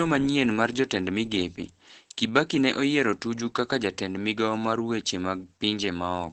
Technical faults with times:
0.00-6.32 Opus voice compression

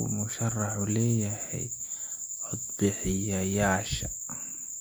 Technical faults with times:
none

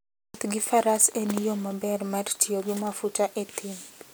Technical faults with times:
none

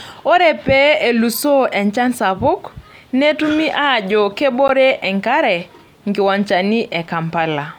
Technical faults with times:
4.68 gap at a join of encoded pieces

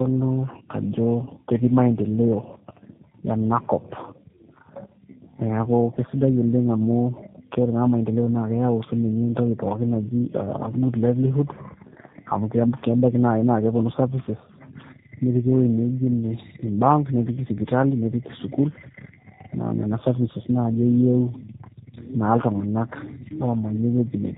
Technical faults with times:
0.00-24.38 tandem speech coding

